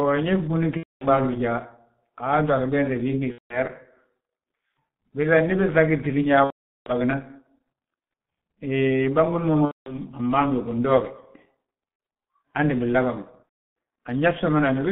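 The speech carries heavy G.723.1 codec damage throughout. At 6.3 kbit/s and a 150 Hz to 3.5 kHz line band, it sounds muffled and hoarse. Consonants blur.

VoIP packet loss concealed by the speech codec strikes at 0.77–1.06, 3.32–3.60, 6.44–6.92, 9.65–9.99, 11.90–11.99 and 13.43–13.52 s. The decoder repeats its last sound, stretching it into a buzzy tone or coloured noise that fades. Speech recovers weakly afterwards.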